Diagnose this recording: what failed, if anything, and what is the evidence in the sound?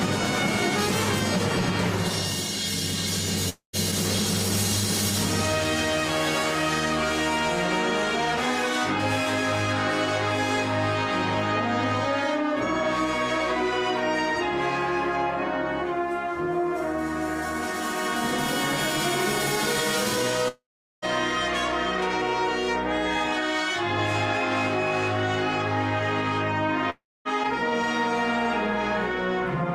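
The network stage failed, most likely with a long network dropout. There are three gaps, at 3.49 to 3.76 s, 20.48 to 21.05 s and 26.90 to 27.28 s. In each one the last bit of sound smears into a fading buzz, then goes quiet for about 0.12, 0.41 and 0.25 s. When the audio returns it has skipped ahead by roughly 0.24, 0.54 and 0.36 s. The receiver had nothing to play, so it stretched out the old audio and then gave up.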